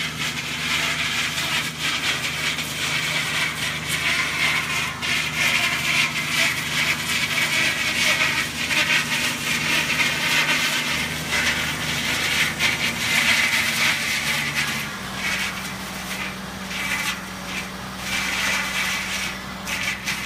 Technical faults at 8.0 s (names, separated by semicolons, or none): none